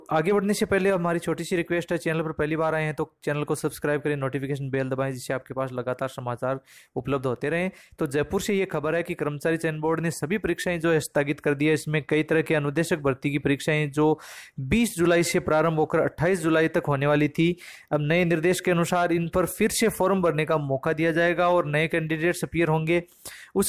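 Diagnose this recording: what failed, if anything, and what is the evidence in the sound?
Nothing failed; no faults heard.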